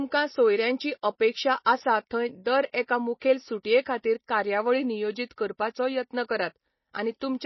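Throughout, the speech sounds dull and watery, with nothing above 5.8 kHz; the likely cause is MP3 compression, fitting a bitrate near 24 kbps.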